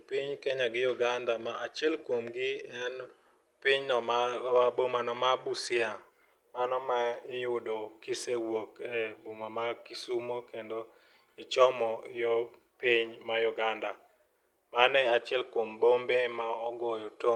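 No technical faults are audible.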